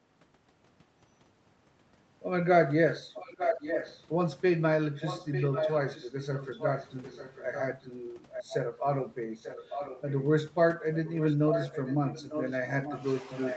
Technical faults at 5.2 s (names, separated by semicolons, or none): echo leak